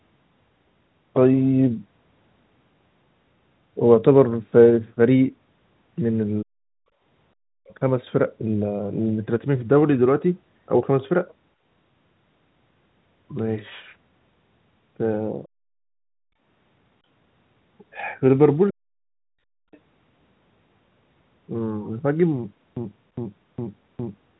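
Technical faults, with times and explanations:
6.42–6.9 s and 18.71–18.79 s, speech suppressed in double talk: the speech sinks by roughly 40 dB, for about half a second and then a brief instant. This is likely an echo canceller mistaking the talker for echo while the far end spoke.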